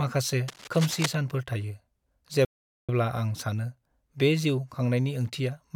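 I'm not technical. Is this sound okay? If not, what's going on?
No, there are two problems. From 0.48 to 1.06 s there's cable scratch noise, a scratchy rustle over the speech, likely from a worn cable or plug being moved so its electrical contact kept flickering. Then at 2.45 s there's a playback stall: the speech cuts out into silence for about 0.44 s, until 2.89 s, then carries on. That's likely the player running short of data or getting held up for a moment.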